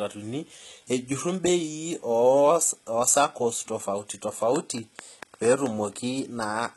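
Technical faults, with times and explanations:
Throughout, HE-AAC compression: heavy codec damage and nothing above 11.8 kHz. Treble is likely rebuilt from copied lower bands, so s sounds turn gritty and metallic.
4.56 to 5.67 s, train of clicks: about seven similar clicks at a regular 4.5 per second, roughly 15 dB above the signal, likely from interference or a faulty connection.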